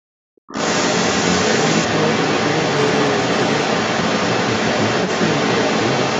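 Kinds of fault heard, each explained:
Speech suppressed in double talk: From about 0.17 s to 0.52 s, the talker's voice sinks sharply. At its deepest it falls around 40 dB, close to silence. The dip covers roughly 0.4 s in all. The likely cause is the echo canceller failing to tell the near talker from loudspeaker echo while both sides spoke. It then turned everything down together, the wanted speech included.
Other side's voice leaking through: From about 0.49 s to the end, a second voice is audible alongside the talker. It is not faint. It sits a few dB louder than the talker's own speech, so it competes directly. It spans most of the clip. This is likely far-end sound from the device's loudspeaker reaching the microphone. The echo canceller did not remove it, so the other side is heard in the outgoing audio.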